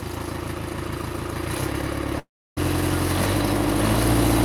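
From 2.19 s to 2.59 s the audio breaks off in a long network dropout. The last sound is carried on briefly as a decaying buzz or hiss before giving way to about 310 ms of silence, and the signal then resumes further along. The cause is likely a gap in packet delivery of roughly 380 ms. The receiver's concealment tried to fill about 371 ms of it, but the missing material was never recovered.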